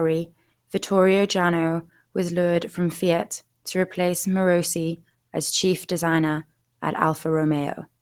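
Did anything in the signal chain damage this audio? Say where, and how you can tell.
Yes. Throughout, the speech sounds hoarse, rough and grainy, with plainly audible codec damage even though content reaches about 20 kHz. The codec stage is the likely cause: Opus compression at a low bitrate near 16 kbps, filling the spectrum with noise in its hybrid speech mode.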